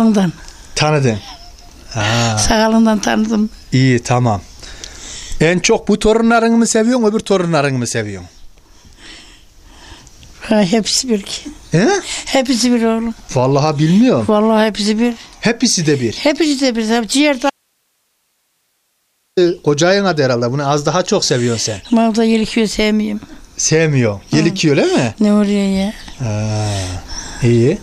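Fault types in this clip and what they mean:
Audio dropout to a faint residue: At 17.50 s the sound cuts off abruptly, mid-flow rather than through a fade or a natural pause, and for about 1.87 s only a low hiss remains, roughly 50 dB below the normal level, until the sound snaps back at 19.37 s. The live hiss in the gap points to a likely interruption of the wanted signal upstream while the recording path after the break kept running.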